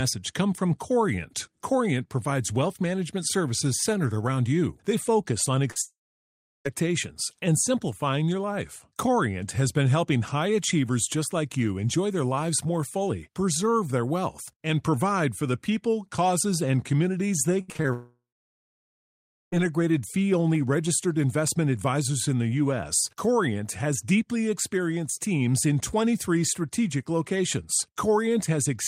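A speech recording over a network call. At 5.71 s, short concealed packet loss lost about 40 ms, which the receiver patched by extending the preceding sound, leaving a brief smear. Right after, from 5.82 to 6.67 s, the audio trails off into roughly 0.7 s of silence and returns with about 0.84 s missing, likely a long network dropout. From 17.61 to 17.87 s, repeated packet loss left four short gaps, the longest 70 ms, with about half the span concealed, giving choppy, robotic sound. A second likely long network dropout follows at 17.93 to 19.62 s: about 1.6 s is lost, with roughly 1.3 s of silence before the audio resumes further on.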